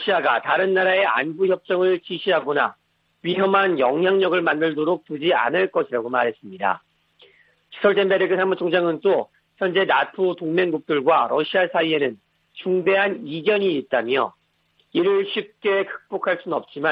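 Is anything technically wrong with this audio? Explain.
No, nothing stood out as technically wrong on listening to this audio.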